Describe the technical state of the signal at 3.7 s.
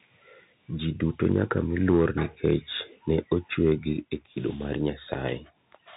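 At 3.7 s the speech is in a brief burst of microphone overload, running from 3.64 to 3.73 s and ending just before "gi e kido mar". The loudest peaks are flattened against the converter's ceiling, most likely because the input level was set too high and the signal pushed about 2 dB past full scale. Only a small share of the waveform is clipped, but those squared-off tops add a hard, crackling edge to that syllable. Unlike codec grit, this crackle comes and goes with the loudness peak itself.

Underneath it, and across the whole clip, runs the Bluetooth CVSD headset codec. Nothing above 3.8 kHz survives, and the hiss and scratchy s sounds fit a one-bit up-or-down stream at 64 kHz whose adaptive step can't keep pace with fast, loud changes. That codec distortion is a steady granular roughness present everywhere. The overload is a momentary harshness confined to those 90 milliseconds.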